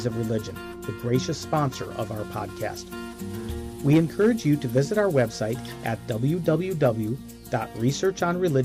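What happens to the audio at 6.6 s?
Nothing goes wrong at 6.6 s: the audio carries on cleanly through that moment with no dropout, click, distortion or other fault.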